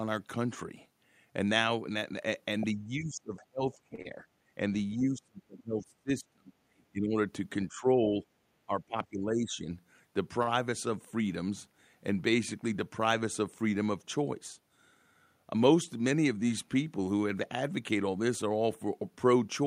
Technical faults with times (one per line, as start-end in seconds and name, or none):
2.75-4.23 speech suppressed in double talk
3.95-4.00 short stall from a late packet
4.02-4.07 short concealed packet loss
4.91-4.99 other side's voice leaking through
4.95-6.52 speech suppressed in double talk
6.90-7.15 speech suppressed in double talk
7.68-8.24 speech suppressed in double talk
8.66-9.69 speech suppressed in double talk
8.98-9.24 jitter buffer speed-up
10.43-10.49 short stall from a late packet
17.81-18.17 jitter buffer speed-up